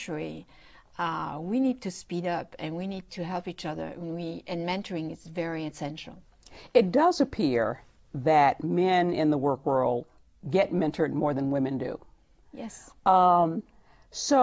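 No technical faults can be heard anywhere in this recording. Nothing in the audio marks a point where the signal chain went wrong.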